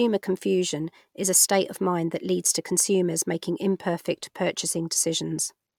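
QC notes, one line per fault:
Nothing to flag here, the speech comes through without any technical faults worth noting.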